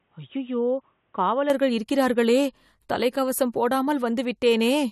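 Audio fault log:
0.0–1.5 s input switched to a poorer device: speech is boxy and cut off above 3.8 kHz, roughly 5 dB quieter over its own faint hiss, then clears without a gap before "இருக்கிறார்களே தலைக்கவசம்". The changed level and noise, not just bandwidth, point to a likely different microphone rather than filtering.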